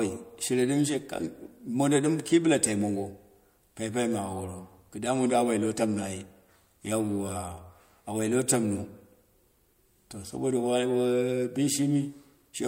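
No technical faults can be heard at any point in the recording.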